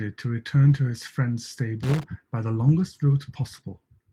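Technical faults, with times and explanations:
1.83 to 2.03 s, loose connector crackle: a worn contact in the signal path makes and breaks for about 0.2 s, chopping the speech into an irregular scratchy burst. The waveform shows jagged dropouts and spikes; the spectrogram shows scattered broadband vertical streaks.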